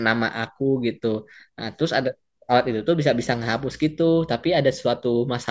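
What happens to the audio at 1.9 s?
Nothing goes wrong at 1.9 s; the audio runs through that point intact, with no dropout, click or distortion.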